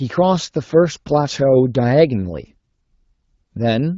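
No faults are present in this speech; the audio carries the light coding character expected of AMR wideband (HD Voice) at 12.65 kbit/s.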